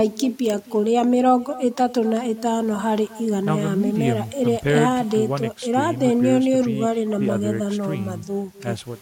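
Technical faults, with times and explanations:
Throughout: echo with no canceller. The far end is playing the call over a loudspeaker, and its microphone picks that playback up and sends it back with nothing in the path to cancel it. As a result, the speech returns after the network round trip, trailing the original by roughly a third of a second. The returned copy sits about 20 dB below the direct sound, and it comes back thinner, so every phrase is shadowed by a faint, thin repeat.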